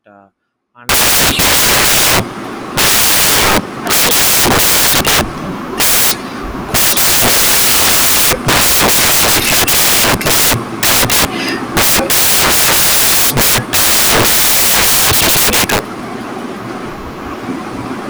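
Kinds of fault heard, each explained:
Samples built from the wrong bytes: each sample's bytes are assembled wrongly from 0.89 s onward, giving loud, harsh broadband noise, close to white on the louder speech.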